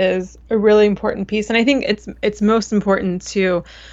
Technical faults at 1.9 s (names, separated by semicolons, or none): none